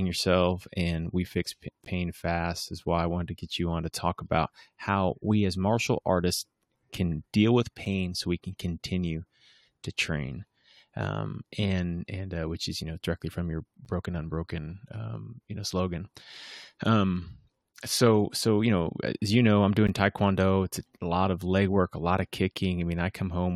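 Gaps between stream segments occur at 1.85, 7.85, 13.85 and 19.87 s, spaced about 6 s apart, which points to 6-second segments. At each join, the timestamps of consecutive segments fail to meet, and the player pads the difference with silence: 15.2, 7.1, 9.8 and 12.5 ms respectively. Each sounds like a brief, hard-edged dropout in the speech, a tiny click-like hole, though nothing is actually missing.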